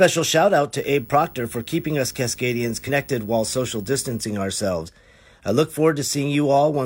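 From 0.78 to 4.22 s, just after "shout out", a screen or video cable couples into the audio path, producing video or display buzz: a 59.94 Hz field-rate buzz with hash above it and a 15.7 kHz line-rate whine, roughly 25 dB below the speech.

At 2.84 to 2.90 s, the decoder drops compressed frames, either missing from the file or rejected as damaged. Roughly one 46.4 ms frame is skipped, so the speech jumps ahead by about 50 ms.

At 4.83 to 4.90 s, just before "I look", more compressed frames are skipped, roughly two this time. The speech leaps forward by about 100 ms.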